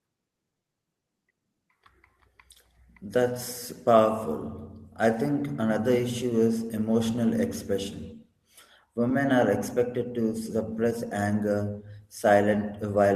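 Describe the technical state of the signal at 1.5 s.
The speech at 1.5 s is intact, with no dropout, distortion, glitch or other fault at that moment.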